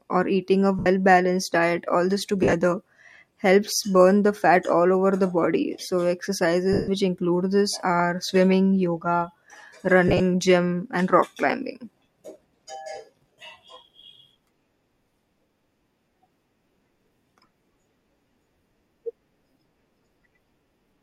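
Lost LE Audio frames interrupt the speech at 0.79 s (70 ms, after "or eating a"), 2.43 s (80 ms scattered over 100 ms, longest run about 50 ms, after "balanced diet all this"), 6.73 s (150 ms, before "include this are swimming"), 10.08 s (70 ms spread over 120 ms) and 13.33 s (50 ms). The lengths fit 10 ms frames. For each gap the decoder repeats the last spectrum with scrambled phase, so voiced sound becomes a hissy smear. At 6.73 s it fades toward silence before the speech resumes.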